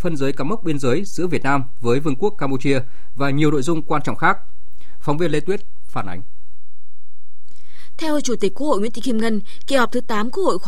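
Across the whole speech clip nothing is directly audible, yet a DC offset of about -15 dBFS shifts the waveform off zero, eating headroom and leaving steady energy at 0 Hz.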